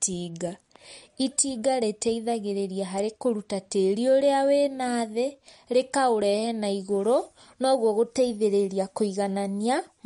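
Throughout the speech, the sound is watery and swirly, with plainly audible smearing, chirpy s sounds, and nothing above 11.2 kHz. This is likely MP3 compression at a low bitrate, around 48 kbps, where the encoder drops the treble and lets weak frequency lines flicker between frames.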